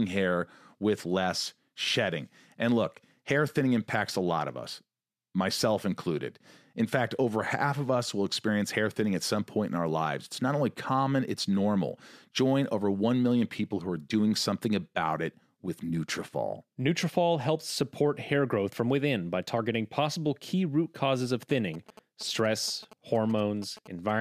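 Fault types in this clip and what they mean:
GSM signalling bursts, 21.43 to 24.11 s: a galloping dit-dit-dit of short buzzes pulsing at about 217 Hz sits under the speech, around 20 dB below it. The pattern points to a nearby 2G phone sending only brief groups of radio bursts, as it does while signalling to the network, and the audio circuitry rectifies that radio energy into an audible buzz.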